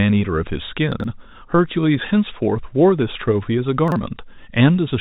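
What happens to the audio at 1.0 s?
Around 1.0 s the speech has chunks out of order. Between 0.92 and 1.04 s, one 40 ms piece of audio plays late, after the two pieces that should come after it. Nothing is missing. The three pieces are simply shuffled. That leaves three hard joins where the waveform jumps. The result is a brief jumbled, garbled moment lasting about 120 ms.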